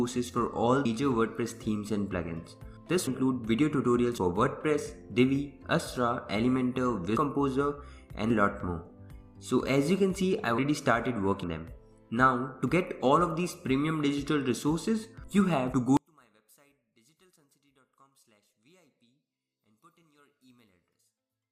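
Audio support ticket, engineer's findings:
Forward jumps in the audio at 0.85, 3.07, 4.18, 7.17, 10.58 and 11.44 s. Missing spans run from about a tenth to a third of a second. Likely a dropped buffer (overrun): capture not read in time, so blocks were overwritten and the two sides spliced. Waveform shows a discontinuity with no gap. Spectrogram shows a thin broadband vertical line at each splice.

From 15.97 s to the end, the mono sum collapses by about 37 dB. Little remains beyond a faint residue. Likely one channel inverted: reversed polarity on one leg cancels the shared content when summed. Spectrogram of the sum is nearly blank.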